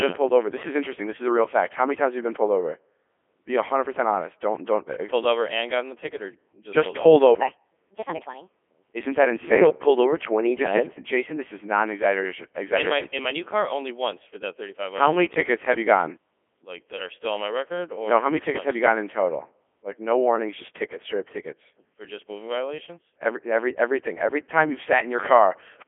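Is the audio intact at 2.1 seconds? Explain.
No. At 2.1 seconds, as throughout the clip, the speech sounds robotic and buzzy, thin, and confined to roughly 250 Hz to 3.4 kHz with nothing above 3.7 kHz. This is the Codec 2 vocoder, likely its 3.2 kbit/s mode, resynthesising the voice from sine waves instead of keeping the waveform.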